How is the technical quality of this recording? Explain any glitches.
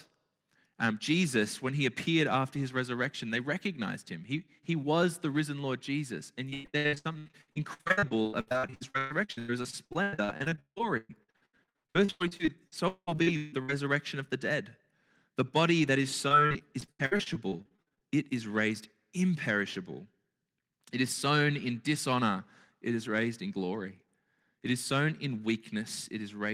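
The recording has two stretches of repeated packet loss (robotic sound).

From 6.49 to 13.70 s, just before "of the dead", dozens of packets went missing. Each hole was patched by stretching the preceding sound, covering nearly half the span, with gaps up to 193 ms. The result is choppy speech with pieces missing.

From 16.28 to 18.02 s, between "body that is" and "it is raised imperishable", the same repeated loss returns more lightly. About 30% of that span is concealed, with gaps up to 76 ms, leaving a briefer, choppy stutter.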